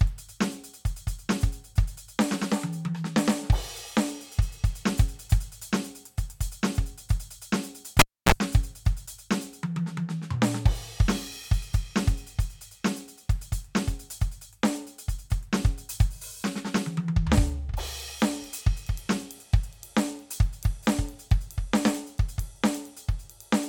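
At 7.99 s the music cuts out with a pop, drops to near silence for about 280 ms, then gives a brief 31 ms burst of 60 Hz mains buzz and a second pop as it returns at 8.32 s. The cable was pulled and plugged in while live.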